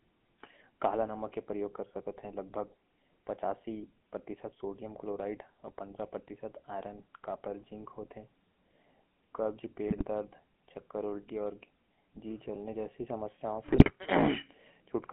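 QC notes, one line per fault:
Throughout, GSM full-rate codec: the sound has that buzzy, gravelly grain you get when the vocal tract is modelled and driven by regularly spaced pulses, with only every third excitation sample kept. The damage is plainly audible, and the band sits at roughly 200 Hz to 3.4 kHz, so there's no air or sibilant sparkle on top. The overall character points to the 13 kbps full-rate GSM coder rather than one of the later, smoother ones.
9.88–10.03 s and 13.68–13.92 s, GSM bit errors: two short bursts where the decoder clearly got corrupted data and the sound breaks into squawks, pops and a gargly smear. Flipped bits in the filter, pitch or gain parameters bend the spectrum or spike the level frame after frame while the bad patch lasts. The first burst spans several 20 ms frames, and the second is longer and messier, which fits an error rate of a few percent on a weak link.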